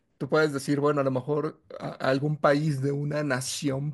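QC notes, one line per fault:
No faults heard in this speech recording.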